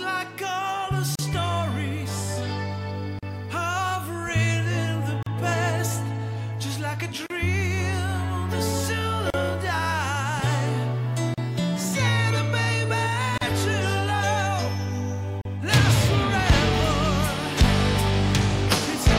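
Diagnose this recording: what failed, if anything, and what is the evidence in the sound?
Gap at a join of encoded pieces (codec stage) at 1.15, 3.19, 5.23, 7.26, 9.30, 11.34, 13.38 and 15.41 s: roughly 37 ms silences about every 2 s, where separately encoded chunks keep their untrimmed start delay and end padding.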